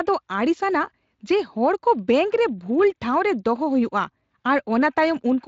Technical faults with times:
none

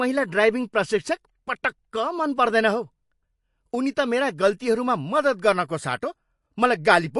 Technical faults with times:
0.00-7.20 MP3 compression

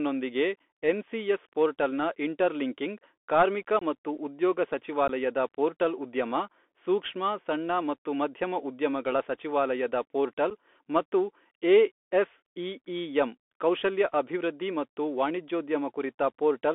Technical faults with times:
0.00-16.74 Bluetooth CVSD headset codec
0.59 unconcealed Bluetooth headset packet loss
3.79-3.83 unconcealed Bluetooth headset packet loss
5.08 unconcealed Bluetooth headset packet loss
10.50 unconcealed Bluetooth headset packet loss

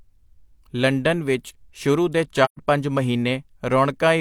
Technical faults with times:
2.44-2.60 AAC frame loss with muting

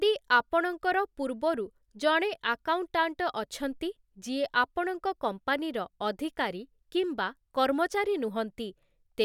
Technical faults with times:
none

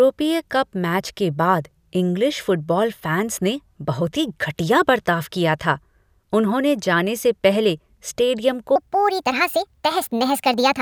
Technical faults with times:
8.76-10.81 wrong sample rate

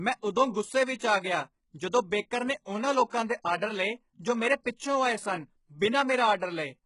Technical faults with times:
0.00-6.85 HE-AAC compression
2.65-2.67 pre-echo

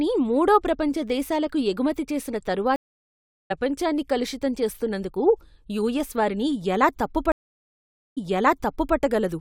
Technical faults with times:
2.76-3.52 stream reconnect
7.32-8.96 stream reconnect

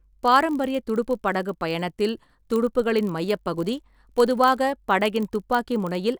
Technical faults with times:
0.00-6.19 block size mismatch (padded)

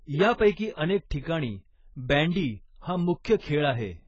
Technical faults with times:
0.00-4.08 AAC compression
0.52-0.57 pre-echo
1.10 pre-echo
3.24 pre-echo

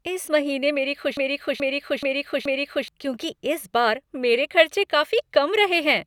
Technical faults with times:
1.17-2.88 broken-record loop

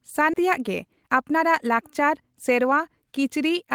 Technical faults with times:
0.33 skip ahead
0.44-2.81 jitter buffer speed-up

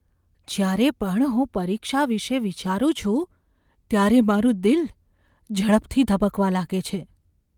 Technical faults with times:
none

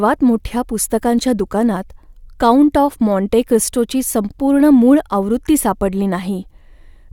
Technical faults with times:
none

